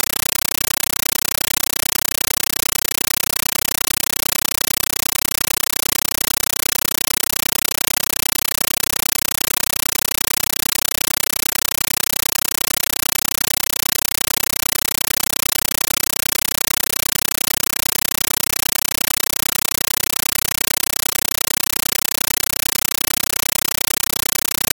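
A compressed stream played as audio: the AC-3 bitstream reaching the output was treated as plain samples rather than decoded, so throughout the clip the sound is replaced by loud chattering static, with bursts of noise about 9.33 ms long repeating 31.25 times a second, which fits a 448 kbps stream.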